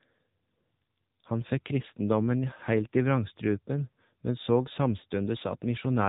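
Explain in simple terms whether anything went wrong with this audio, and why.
Yes, something went wrong. The speech has passed through the AMR narrowband mobile codec, the squeezing method used on older mobile phone calls, and the damage is plainly audible from start to finish. Nothing above about 3.8 kHz survives, so the voice sounds thin and boxed-in. Unlike simple muffling from a filter, the codec also rebuilds the voice from a rough model, which gives it a buzzy, synthetic edge.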